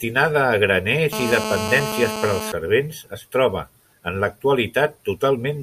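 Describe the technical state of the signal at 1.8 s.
At 1.8 s the speech is overlaid by GSM phone buzz, which runs from 1.13 s to 2.52 s. A nearby 2G handset on a call is transmitting in bursts about 217 times per second, and the audio circuitry rectifies those radio pulses into the signal path. The result is a steady, hard, raspy buzz at 217 Hz, rich in harmonics and unrelated to the speech, sitting about 6 dB below the speech level.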